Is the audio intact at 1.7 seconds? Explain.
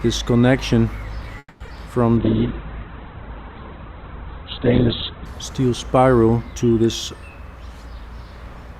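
No. Around 1.7 s the audio is still recovering from a call audio freeze that runs from 1.38 to 1.61 s. Delayed packets likely emptied the jitter buffer, so the receiver stretched the last sound for about 220 ms as a fading buzz or hiss, ending in about 40 ms of silence. Nothing is lost; the audio simply resumes late. On a spectrogram the final spectral pattern smears horizontally, then dims to a dark strip. The waveform shows a repetitive, decaying envelope that drops to near zero.

Right after that, two short concealed packet losses fall at 1.65 to 1.67 s and 1.68 to 1.70 s. Each removed about 10 ms that never reached the decoder in time, and the receiver filled it by extrapolating the preceding sound before crossfading back to the real audio. By ear this is a quick smear or wobble. A spectrogram shows two thin vertical blurs.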